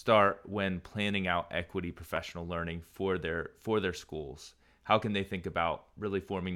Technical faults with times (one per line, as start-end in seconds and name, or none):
2.04-2.29 CD scratch ticks